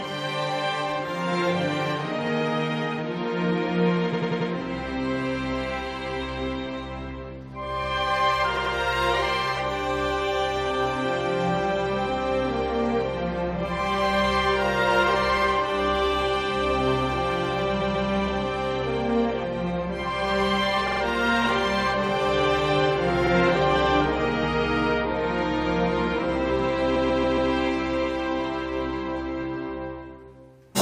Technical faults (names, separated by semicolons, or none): repeated frames